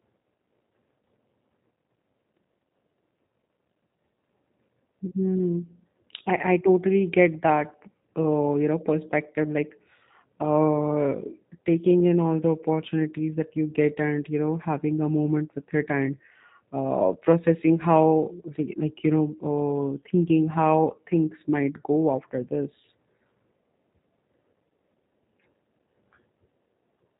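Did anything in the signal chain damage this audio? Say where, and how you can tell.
Yes, at the codec stage, throughout. The speech is cut off above 4 kHz and sounds rough and plainly synthetic, which points to G.729 at 8 kbit/s, rebuilding each 10 ms frame from a vocal tract filter, a pitch predictor and sparse pulses. A plain telephone band-limit would leave speech smooth.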